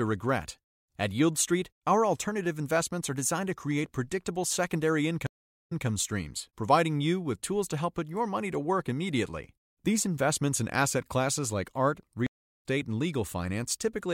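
At 5.27 s, after "to create predictable secondary", a stream reconnect drops the speech into about 443 ms of silence. The fresh decoder then resumes 157 ms earlier, repeating a sliver before "streams providing you with". At 12.27 s, after "asset classes like art", a second reconnect leaves 380 ms of silence and picks up roughly 200 ms later, skipping material. On a waveform each shows a flat gap ending in a fade-in; a spectrogram shows a blank vertical band.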